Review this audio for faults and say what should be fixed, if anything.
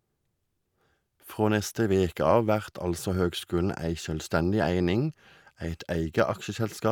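Nothing to fix; no faults are audible anywhere in the recording.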